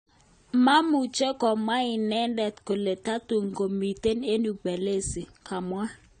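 Speech, with AAC compression damage running through the whole clip. Nothing is heard above 9 kHz. The top end simply stops there. The sound is dull and smeared. Sibilants turn fizzy and sustained sounds warble. The cause is likely AAC-LC coding at a low bitrate. The damage fits something around 32 kbps. At that rate the encoder lowers its cut-off. It also spends too few bits on the bands it keeps. That leaves gaps and swirling texture.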